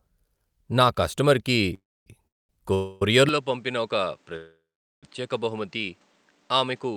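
Speech with four call audio freezes, at 1.74–2.07 s and 2.27–2.50 s (both just after "నా కస్టమర్కి"), 2.74–3.02 s and 4.36–5.04 s. Each sounds like a fading buzz or hiss, mostly trailing into silence, before the talk resumes intact. This is likely from late packets draining the jitter buffer. On a waveform these show as inserted gaps, and on a spectrogram as smeared, decaying bands. From 3.29 s the input is switched to a poorer device, likely a different microphone or a headset profile. The sound turns duller and slightly quieter with a new noise floor, and a spectrogram shows nothing above 9 kHz from that point on.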